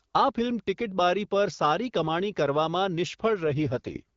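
From 3.44 to 4.02 s an AMR rate drop, fitting a fall to 6.6 kbit/s, turns the speech rough and raspy. The spectrogram keeps its full band with no gap, but the harmonics blur.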